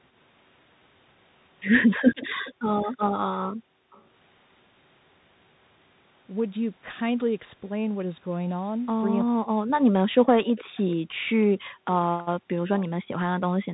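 The whole call passed through a Bluetooth CVSD headset codec, whose one-bit delta coding at 64 kbit/s cannot follow fast, loud changes, and which carries nothing above 3.8 kHz. The sound is narrowband and muffled, with plainly audible damage: scratchy sibilants, a granular hiss underneath, and distortion on strong high-frequency energy.

From 2.24 to 2.97 s there is an echo leak, likely because the far end's echo canceller let part of its loudspeaker pickup return. A delayed copy arrives about 0.33 s behind the original, roughly 20 dB below it, as a faint repeat.

Overlapping this, from 2.54 to 3.92 s, the background is gated by the echo canceller, which clamped the microphone while its loudspeaker played. The room sound drops by up to about 40 dB for around 0.7 s in total and then returns once the canceller releases.

From 3.92 to 4.04 s, a short echo leak recurs at the same 0.33 s delay, likely residual echo slipping past the canceller. 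This time it is much quieter, around 35 dB below the speech, and it is only a brief trace.

From 9.25 to 10.11 s, speech is suppressed in double talk, likely because the canceller confused simultaneous talk from both sides with echo and attenuated everything. The talker dips by up to roughly 40 dB for around 0.7 s in total.

From 10.45 to 10.96 s, another echo leak appears, likely the canceller again failing to remove loudspeaker pickup. It is the same 0.33 s delayed copy, roughly 20 dB below the speech, and it is heard as a trailing repeat.

From 10.65 to 12.56 s, the background is again gated by the echo canceller. The microphone is pulled down by up to about 40 dB, so the room sound drops away for around a second in total before coming back.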